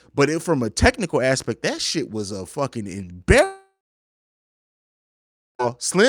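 A speech clip that falls apart right after "shit was a fucking": at 3.43 s the sound smears into a fading buzz, and from there to 5.65 s there's a hole of about 2.2 s, most of it (around 1.9 s) dead silence. That's most likely a long network dropout. Packets stopped arriving, the receiver stretched the last bit of sound until it died away, and when the stream came back the missing stretch was simply gone.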